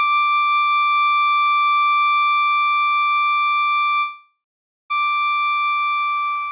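From 4.0 s to 4.92 s the music turns into a fading buzz that stretches the last sound, then drops to silence for about half a second. It returns further on, having skipped about 0.9 s, most likely from a long network dropout. A brief packet-loss glitch would be covered smoothly, and a stall would resume where it stopped. Throughout, nothing sounds above 4 kHz, which fits a G.711 A-law call path.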